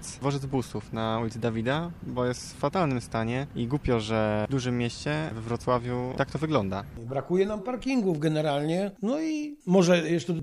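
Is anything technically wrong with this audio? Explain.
No, nothing technically wrong stood out on listening to this audio.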